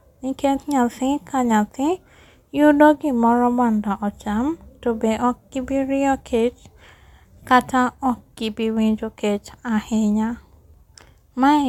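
Nothing in the recording stood out as a technical problem when listening to it.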